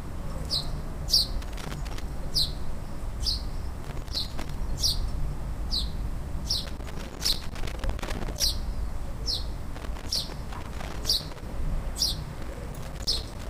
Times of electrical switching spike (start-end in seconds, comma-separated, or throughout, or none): none